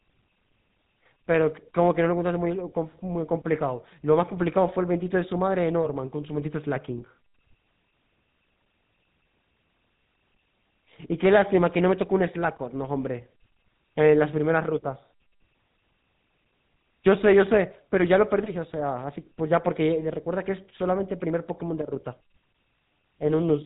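Speech runs through a GSM full-rate codec from start to finish. The voice sounds buzzy and gravelly, and nothing survives above 3.8 kHz. That fits a 13 kbps channel.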